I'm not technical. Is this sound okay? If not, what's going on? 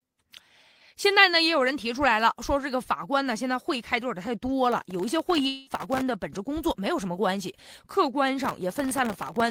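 No. Processor overload crackle appears from 4.72 to 6.01 seconds and again from 8.45 seconds to the end. The computer couldn't keep up with tiny audio chunks, each under a millisecond, so dozens were skipped or filled with repeated old audio, giving a gritty crackle over the speech.

In the middle of the first crackle, from 5.47 to 5.70 seconds, a long network dropout likely occurred. About a fifth of a second of speech never arrived, so the end of the previous sound is stretched into a short fading buzz, and the speech resumes with that piece missing.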